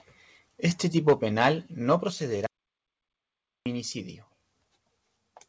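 Speech, carried over a call path whose G.722 coding leaves nothing above 8 kHz. Microphone overload from 0.71 to 1.13 s gives the loudest syllables a harsh, crackling edge, likely from input gain driving peaks about 6 dB past the converter's ceiling, flattening a few percent of samples. Microphone volume stepped down at 1.1 s by about 3 dB and again at 2.1 s by about 5 dB, each a sudden level drop, likely automatic gain control reacting to a microphone that was too loud. An audio dropout to silence from 2.46 to 3.66 s removes about 1.2 s entirely, with no room tone, likely the input being lost while silence kept being written.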